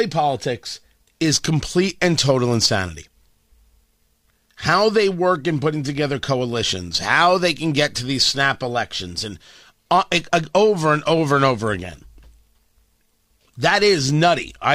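No technical faults can be heard anywhere in the speech; the signal stays steady and intact throughout.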